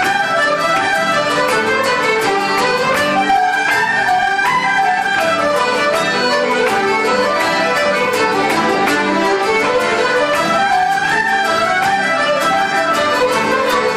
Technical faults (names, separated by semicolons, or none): hard clipping